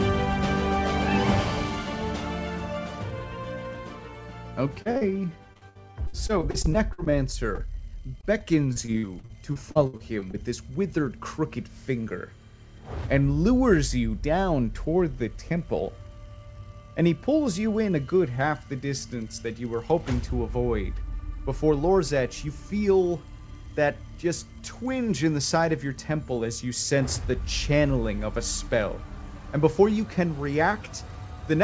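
At 4.82, 4.91 and 4.98 s, three back-to-back short concealed packet losses each drop about 40 ms of audio. The receiver extends the preceding sound across each hole and blends back, giving a quick smeared, wobbling patch just before 5.03 s. A single 20 ms loss at 7.55 s leaves a brief smear.

From 5.53 to 7.12 s, repeated packet loss produces a robotic, choppy stretch: 15 gaps, the longest 60 ms, with about a quarter of the span synthesized. From 8.21 to 10.35 s it returns with 13 gaps (longest 61 ms). Throughout, the call path's band-limited sound, with nothing above 8 kHz, fits G.722 at 64 kbps.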